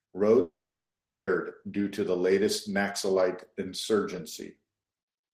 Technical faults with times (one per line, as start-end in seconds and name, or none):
0.41-1.29 long network dropout